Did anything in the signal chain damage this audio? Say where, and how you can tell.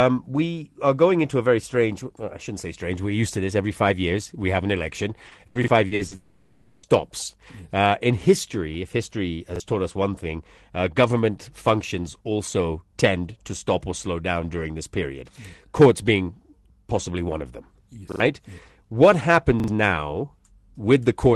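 Yes. Between 5.27 and 6.14 s the speech turns choppy. There is repeated packet loss (robotic sound): six separate holes, the longest 80 ms, together about 280 ms or roughly a third of that stretch. Each hole is filled by extending the last received sound, so the voice keeps being patched over before the next real packet arrives. This is network-stage loss handled by the receiver's concealment.

Right after, from 6.15 to 6.86 s, the speech stops and a continued tail fills the whole 0.68 s. There is no silent gap, and the sound resumes with that stretch missing. This is a long network dropout. A run of consecutive packets likely never arrived, and the decoder stretched the last sound across the entire hole rather than falling silent.

Short stutters occur at 5.64, 9.56, 18.12 and 19.6 s, where a tiny slice plays again with a hard join. This is a repeated buffer at the driver or playback stage: each repeated piece is 40 ms long. 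It plays once extra at the first two points, losing about 40 ms each, and twice extra at 18.12 and 19.6 s, losing about 70 ms each. Fresh audio arrived late and the device replayed what it held.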